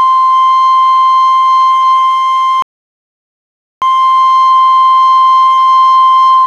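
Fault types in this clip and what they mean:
Rebuffering stall: the player ran dry on downloaded audio around 2.62 s, so the music drops to dead silence and picks up again at 3.82 s exactly where it stopped. Nothing's skipped, but you get roughly 1.2 seconds of extra gap.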